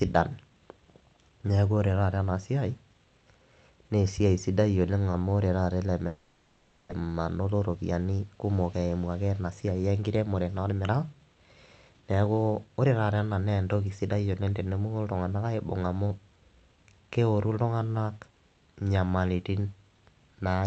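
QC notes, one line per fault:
6.07–6.93 s, long network dropout: right after "ore taata ele" the sound smears into a fading buzz for most of a second, likely from lost packets, and roughly 0.6 s never returns.
7.01–8.43 s, jitter buffer speed-up: the speech rushes at about 115% with unchanged pitch as the receiver trims short pitch-period slices, shedding around a fifth of a second of built-up delay; the Opus top end stops near 8 kHz.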